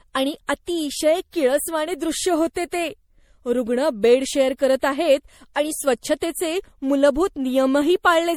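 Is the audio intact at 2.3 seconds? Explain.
No. At 2.3 seconds, as across the whole speech clip, the sound is swirly, hollow and smeared, with consonant onsets blurred and no content above 19 kHz. This is generation loss, likely from the audio being decoded and re-encoded about three times with MP3, in a way that fits 64 kbit/s. Each pass re-quantises on a shifted frame grid, so noise and spectral gaps pile up beyond what one encode at that rate would leave.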